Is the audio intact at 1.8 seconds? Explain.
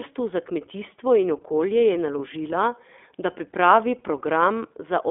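No. Lost iLBC frames cause a dropout from 1.78 to 1.80 s, just after "za kmetijstvo in", which fits one missing 20 ms frame. The decoder fills the gap by repeating the last pitch cycle blended with noise, so it sounds like a brief held, slightly buzzy vowel. Because iLBC frames are coded independently, the sound recovers immediately afterwards.

The whole clip also passes through the iLBC codec at 15.2 kbps. It is band-limited to about 250 Hz to 3.5 kHz, and its frame-by-frame excitation coding leaves plainly audible roughness and a synthetic edge.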